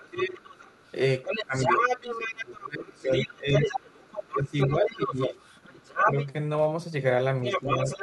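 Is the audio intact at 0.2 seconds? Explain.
No. From 0.0 to 0.41 s the talker's speech is pushed down, at its deepest roughly 15 dB, for about 400 ms. This is speech suppressed in double talk, likely from an echo canceller turning everything down while both sides spoke.

The other side's voice is also leaking through from 0.0 to 2.59 s, reaching about the same loudness as the talker. Because the residual echo was likely not cancelled, a second, separate voice runs alongside. It is not a smeared reverberant copy of the talker's own speech.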